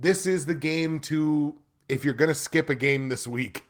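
No technical faults turn up anywhere in this speech recording.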